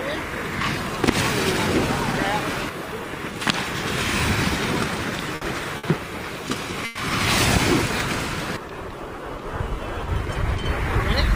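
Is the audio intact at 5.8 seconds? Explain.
No. A burst of packet loss hits at 5.77 to 5.86 s: a short run of consecutive packets either never arrived or arrived too late to play. The receiver filled the hole by stretching the last good sound for about 60 ms while fading it down, so you hear a brief held, decaying smear rather than fresh audio. Playback then picks up further along, with roughly 60 ms of the original sound simply missing.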